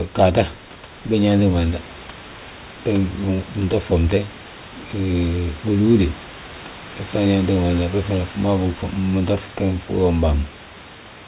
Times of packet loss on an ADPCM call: none

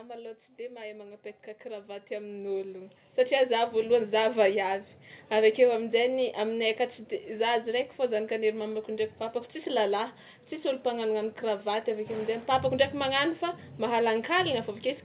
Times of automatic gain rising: 0.56-4.15

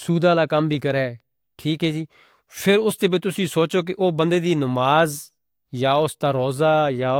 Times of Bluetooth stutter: none

